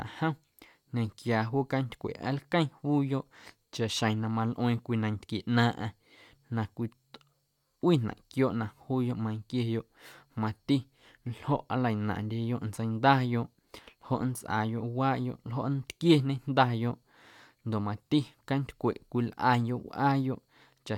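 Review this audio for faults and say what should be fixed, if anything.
No faults heard; nothing needs fixing.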